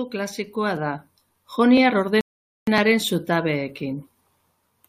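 Speech with clicks or stutters at 0.77, 1.77, 2.78 and 3.79 s, evenly spaced. These are overlapping chunks: the audio was handled in 1.0 s pieces, each starting slightly before the last ended, so about 7 ms plays twice at every join. Between 2.21 and 2.67 s the sound drops to silence, then resumes exactly where it stopped. This is a rebuffering stall: the player ran out of downloaded audio and waited, losing nothing but adding about 0.46 s.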